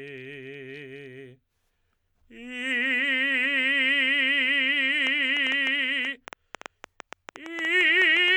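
From 5.07 s to 8.29 s a train of clicks, about 7 per second and irregularly spaced, ticks roughly 10 dB above the music, likely from electrical interference.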